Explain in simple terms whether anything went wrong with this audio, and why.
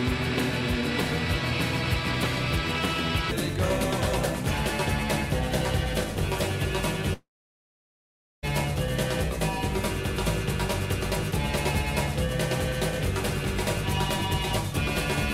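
At 7.13 s the sound suddenly thins into a fading buzz, then about 1.2 seconds of near silence follows until 8.45 s, when the audio resumes further along with roughly 1.3 seconds skipped. This is most likely a long network dropout: the audio stopped arriving, and the player briefly stretched out the last sound before giving up. Unlike a brief packet-loss glitch, the gap is long enough to hear as a hole, and unlike a natural pause, content is missing.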